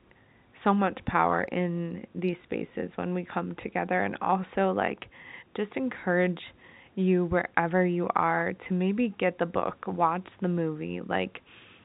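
No technical faults are audible.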